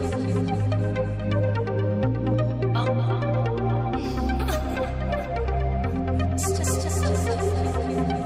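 No audible technical faults occur anywhere in this recording.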